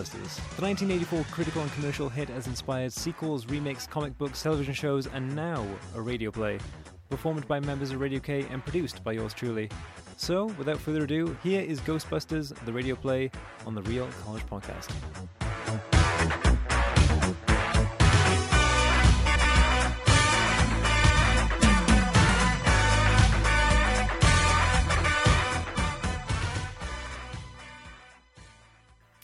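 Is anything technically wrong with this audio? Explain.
Yes: frames out of order, at 9.99–10.15, 19.26–19.45, 21.02–21.17, 24.85–25.05 and 27.06–27.17 s. Each time, two adjacent blocks of frames, about 70, 93, 70, 93 and 46 ms long respectively, were decoded in swapped order. The stretch plays with its halves exchanged and no time is lost. The result is a brief garbled flutter.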